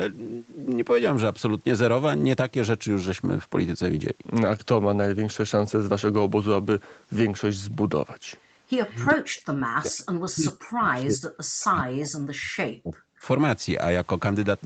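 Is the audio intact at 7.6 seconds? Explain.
Yes, the speech at 7.6 s is intact, with no dropout, click or glitch; it simply carries the ordinary band limit of the call path, with nothing heard above about 8 kHz.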